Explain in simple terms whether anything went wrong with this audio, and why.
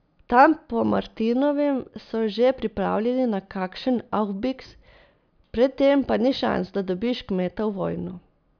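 Nothing went wrong with this recording, as no technical faults can be heard anywhere in it. The speech comes through steadily, with no dropouts, glitches or interruptions to point to.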